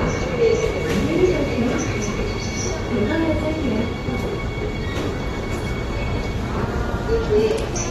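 Sounds that are dull and smeared throughout, with warbling, fizzy texture and nothing above 12.4 kHz, likely AAC compression at a low bitrate, around 32 kbps.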